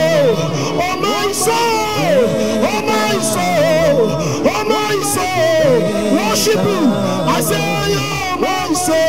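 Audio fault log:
No faults are heard in this clip. Nothing in the audio calls for an entry in this log.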